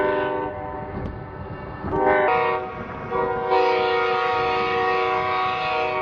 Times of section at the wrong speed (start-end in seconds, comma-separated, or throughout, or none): 0.00-2.28